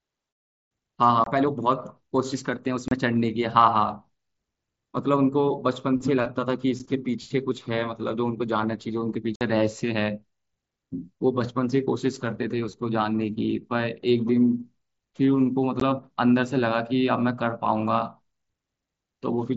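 Voice packets between headset and phone were dropped with no concealment, leaving silent gaps in the speech: unconcealed Bluetooth headset packet loss at 1.24–1.27 s (about 22 ms), 2.88–2.92 s (30 ms), 6.79 s (7.5 ms), 9.36–9.41 s (about 53 ms) and 15.80 s (15 ms). Each hole has abrupt edges that can click, and the lengths fit multiples of 7.5 ms frames. Through the wideband mSBC link, the speech carries light graininess on loud sounds.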